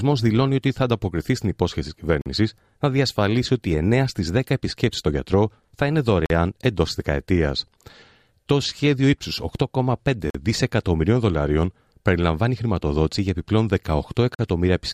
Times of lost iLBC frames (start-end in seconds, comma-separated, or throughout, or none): none